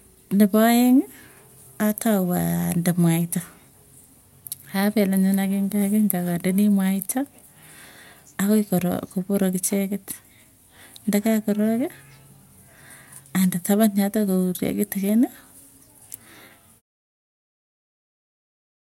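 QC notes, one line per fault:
No faults to note.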